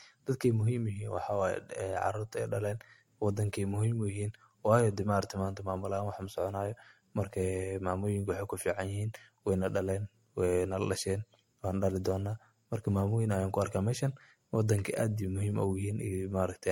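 Speech that sounds swirly, smeared and hollow throughout, with blurred attacks and nothing above 16.6 kHz, likely generation loss from about three passes through MP3 near 64 kbit/s.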